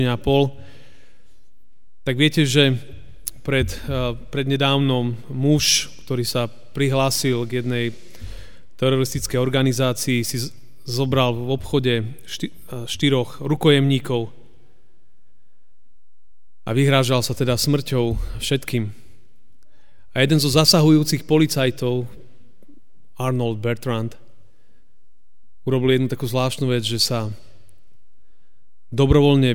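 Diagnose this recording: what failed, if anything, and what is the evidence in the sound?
Nothing failed here: there's no dropout, distortion or glitch anywhere, so no stage of the chain needs a closer look.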